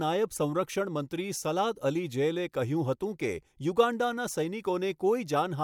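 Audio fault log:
No faults found in the speech recording.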